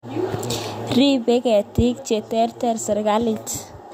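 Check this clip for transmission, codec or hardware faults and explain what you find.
One fault: chunks out of order between 0.31 and 0.34 s. A 10 ms chunk plays two chunks late, leaving three hard joins that jumble the speech, visible as thin vertical broadband streaks and waveform steps.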